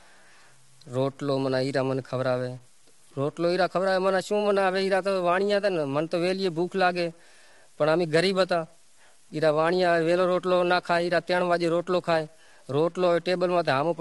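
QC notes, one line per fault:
Throughout: low bit depth without dither. The speech carries a grainy, gritty distortion that rises and falls with the signal instead of sitting as a steady hiss, and it is most obvious on quiet syllables and decaying word endings, which roughen and break up. The error floor sits roughly 35 dB below the speech. This points to likely 8-bit truncation with no dither, so the rounding error stays locked to the waveform.
Throughout: low-delay AAC compression. Voiced sounds are rough and grainy, with noise filling the gaps between pitch harmonics, and nothing is present above 11.6 kHz. The damage is plainly audible. The short analysis frames of a low-delay codec resolve harmonic structure poorly, so the encoder spreads noise across the spectrum and drops the top band. The sound fits AAC-ELD at a low bitrate of around 32 kbps.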